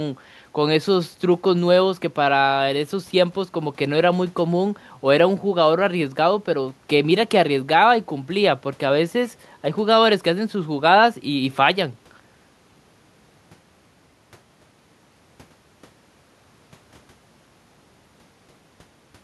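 No technical faults can be heard anywhere in the speech recording, and the signal stays steady and intact throughout.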